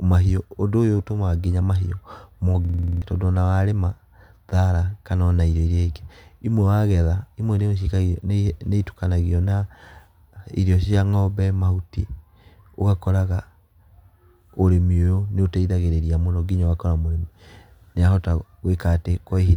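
A system hang loop from 2.65 to 3.02 s: playback froze while the hardware replayed one 46 ms buffer eight times, a rattling 21.5 Hz stutter.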